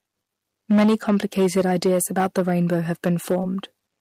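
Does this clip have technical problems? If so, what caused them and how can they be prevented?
Yes. Hard clipping runs through the whole clip. The speech drives some stage about 8 dB past its limit, so roughly one sample in twenty is cut flat. Those flat tops add high harmonics, heard as distortion on loud syllables. Set gain lower so peaks stay below full scale.

Short concealed packet loss occurs from 3.41 to 3.45 s. About 20 ms of audio never arrived. The receiver continued the previous sound for about 16 ms, then blended back, leaving a brief smear. A steadier network with a larger jitter buffer prevents this.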